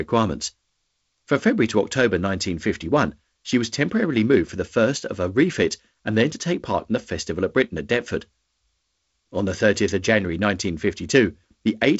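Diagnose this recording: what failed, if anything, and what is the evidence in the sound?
Nothing in this recording failed.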